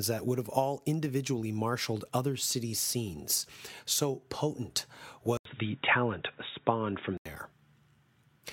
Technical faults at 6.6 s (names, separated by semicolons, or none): input switched to a poorer device